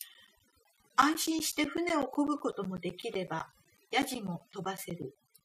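A noise reduction stage set far too aggressively runs over the whole of this speech recording, pulling any frequency band near its noise estimate down toward nothing. This overdone noise removal leaves a near-silent background flecked with twinkling specks. Periodic USB or driver dropouts also occur: something stalls the audio path every 0.125 s from 0.14 s to 5.41 s, and each stall replaces around 10 ms with silence. This gives about forty evenly spaced ticks, eight per second.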